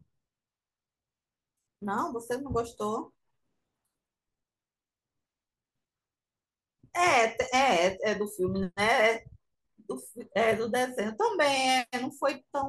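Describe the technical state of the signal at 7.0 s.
At 7.0 s the speech signal is intact, with no fault present at that moment.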